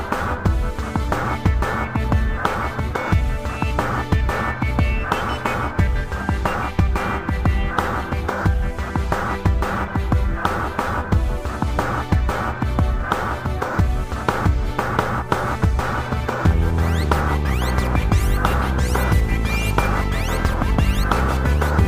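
No technical faults can be heard anywhere in the audio.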